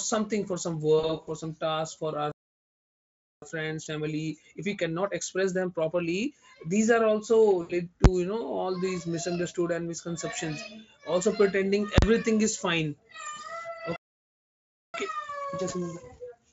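VoIP packet loss concealed by the speech codec, 0.99 to 1.30 s: about 120 ms of frames went missing in short runs, and the decoder extrapolated each gap, giving a buzzy, fading smear.

Playback stall, 2.32 to 3.42 s: right after "some task for our", the sound cuts out for about 1.1 s, likely because the player ran dry of data.

Time-compressed catch-up, 3.42 to 6.42 s: the player works off its backlog at 1.25 times speed, splicing out small pieces so pitch holds while the speech sounds hurried.

VoIP packet loss concealed by the speech codec, 7.61 to 7.73 s: an 80 ms gap is filled by decoder guesswork that decays into a brief buzzy blur.

Invalid numbers at full scale, 8.04 s: just before "you know", a calculation blew up and a block, consistent with 512 samples, was pinned at maximum level, heard as a single bang.

Invalid numbers at full scale, 11.98 to 12.02 s: between "and misconceptions also pretending" and "is fine", a longer block of about 43 ms, fitting 2048 samples, jams at full scale, giving a loud pop at each edge with silence between.

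Playback stall, 13.96 to 14.94 s: the sound halts for nearly a second.

Time-compressed catch-up, 14.94 s to the end: speech again runs at 1.25 times speed with unchanged pitch. Through all of this the Speex coding at 34 kbps adds little audible damage.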